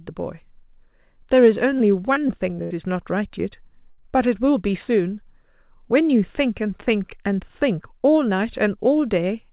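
From 1.78 to 2.72 s, repeated packet loss (robotic sound) chops the speech: four short holes, the longest 77 ms, each patched by looping the preceding sound. The spectrogram shows smeared, repeated harmonic blocks; the waveform shows copied cycles with abrupt joins.

At 3.90 to 4.00 s, a burst of packet loss drops about 80 ms. The last sound is held and faded before speech resumes further on. The spectrogram shows frozen, dimming bands, all below 4 kHz as elsewhere in the call band.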